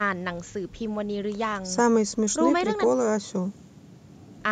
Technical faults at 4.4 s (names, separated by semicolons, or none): none